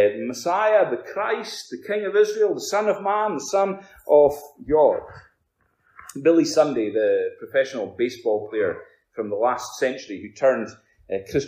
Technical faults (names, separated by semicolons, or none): none